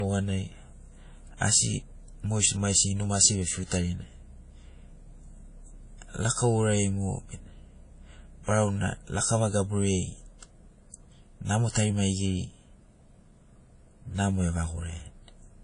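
Throughout the speech, this is likely low-bitrate audio saved at a high bitrate: an earlier coarse encode, consistent with WMA at around 32 kbit/s, was re-encoded as high-bitrate MP3. Nothing sounds above 10.1 kHz, leaving the speech dull, with the first codec's artefacts intact.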